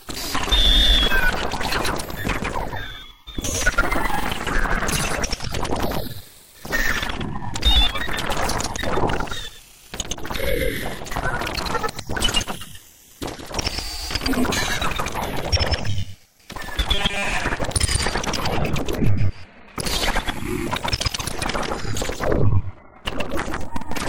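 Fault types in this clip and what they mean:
Robotic sound from repeated short buffers: from 16.95 to 17.33 s the sound turns into a stiff, metallic buzz fixed at 200 Hz. The likely cause is starved playback repeating a fragment of about 5 ms, which skips most of the real audio there.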